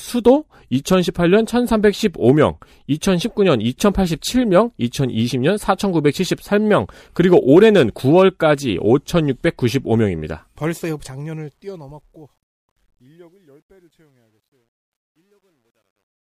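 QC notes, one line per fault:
10.24–16.23 s: truncation distortion on a fade. The speech fades out from about 10 s. The quiet signal is cut to too few bits, with no dither, which fits an 11-bit word length. From 12.7 s the tail turns gritty.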